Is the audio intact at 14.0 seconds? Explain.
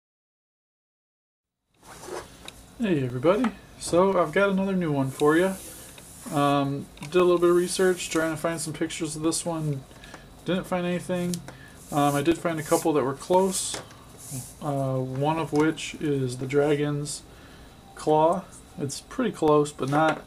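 No. At 14.0 s the audio lies within a run of periodic USB or driver dropouts spanning 1.05 s to 19.48 s. Every 1.024 s the bus or driver stalls, and roughly 2 ms of signal is replaced by silence, producing evenly spaced ticks whenever sound is present.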